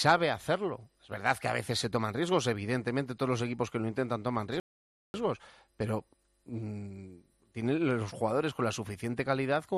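At 4.60 s a rebuffering stall halts playback into 0.54 s of silence; unlike a dropout, it resumes exactly where it stopped, losing nothing.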